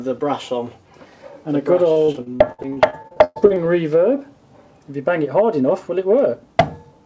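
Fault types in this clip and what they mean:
Repeated packet loss (robotic sound): from 1.92 to 3.58 s, audio packets keep going missing, and each hole is bridged by stretching the preceding sound before the next dropout arrives. About sixteen short holes, the longest 118 ms, add up to roughly half a second of patched-in material, close to a third of that stretch. The result is choppy, robotic sound with fragments absent, heard through a band that stops at 8 kHz, consistent with a wideband call codec.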